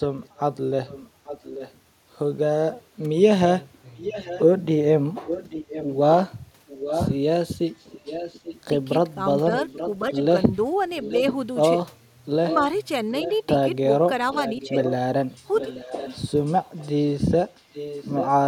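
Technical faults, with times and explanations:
0.25–1.79 s, 3.96–8.61 s, 9.56–11.34 s, 12.47–13.37 s, 14.33–18.29 s, echo leak: a copy of the voice trails about 835 ms behind, about 15 dB down at first and then about 10 dB down, likely a far-end speakerphone whose echo canceller isn't fully cancelling.
8.78–10.16 s, 14.64–14.77 s, speech suppressed in double talk: the voice briefly dips by about 5 dB, for about 0.1 s and then about 0.15 s, likely the echo canceller ducking both sides while the two overlap.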